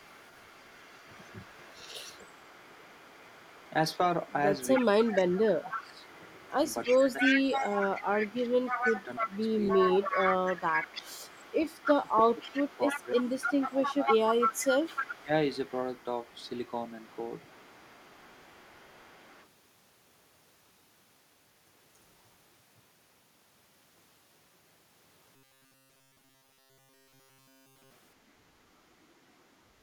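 From the start of the speech to 19.46 s there is an echo leak: a delayed copy of the talker trails the original by about 306 ms, at roughly 10 dB below it. The likely cause is a far-end loudspeaker feeding its microphone, with the echo canceller failing to remove the pickup before sending it back.

Between 2.05 and 10.63 s, and again between 11.85 and 15.31 s, the voice is suppressed in double talk. It dips by up to roughly 15 dB in the first stretch and roughly 20 dB in the second, for about 3 s and 1.5 s in total, likely because the echo canceller confused the talker with echo and attenuated both.

From 25.36 to 27.91 s the speech takes on a robotic sound from repeated short buffers. It becomes a rigid, metallic buzz at 134 Hz that loosely tracks the speech throughout. This points to a segment of about 7.5 ms being replayed while new audio arrived too slowly, which is the likely cause.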